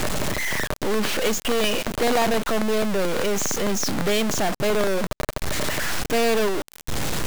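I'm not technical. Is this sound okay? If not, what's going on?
No. A stuck bit runs through the whole clip: a harsh, buzzy distortion over the speech, with noise in the pauses, likely from one digital bit jammed at a fixed value.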